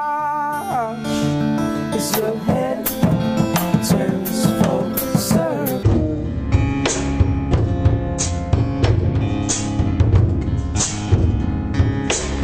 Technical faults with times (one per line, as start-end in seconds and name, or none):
5.83-12.43 section at the wrong speed